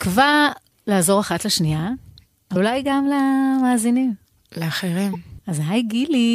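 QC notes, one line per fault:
2.52–2.57 s and 5.13–5.15 s, damaged data in a compressed stream. Each spot breaks the speech with a short chirp, squawk, click or hole, about 40 ms and then about 20 ms long. Part of the compressed data is wrong there. The decoder misreads those frames and loses sync, then hunts for the next valid frame header. That is why each break sounds like a brief glitch in the speech.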